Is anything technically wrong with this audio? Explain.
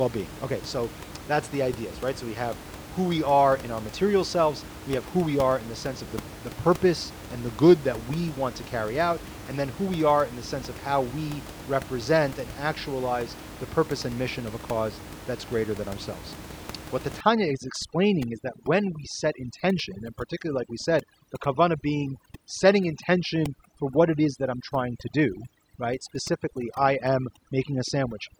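Yes. From 17.21 s to the end at 28.40 s, the background drops and breaks up into twinkling specks: overdone noise removal, which muted bands near the room noise, about 15 dB below speech, and took quiet speech detail with them.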